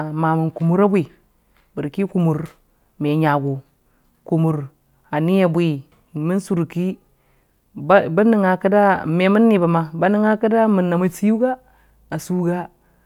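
Nothing in the speech recording stood out as a technical problem on listening.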